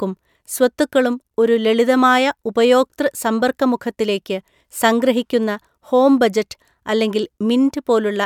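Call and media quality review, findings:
No audible faults detected.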